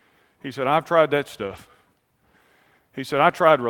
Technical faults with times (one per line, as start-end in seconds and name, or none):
1.43-1.57 lost packet rebuilt from error correction